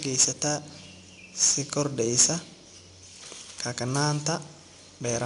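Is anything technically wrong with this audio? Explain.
Yes. Throughout the speech there is a gritty hiss riding on every louder passage, rising and falling with the level, with roughness on sharp onsets and nothing above 10.6 kHz. This is 4-bit ADPCM compression: each sample is coded as a small step from a predicted value, and the step size adapts too slowly for quick attacks, leaving level-following noise. The band limit and grain fit a stream of about 89 kbps.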